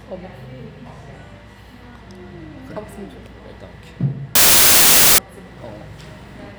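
From 4.35 to 5.18 s a loud wash of noise takes over, with the original sound faintly buried inside it, running about 1.33 times too fast and high. This is a wrong sample width fault: packed 24-bit samples were read as 32-bit, so bytes from neighbouring samples were combined.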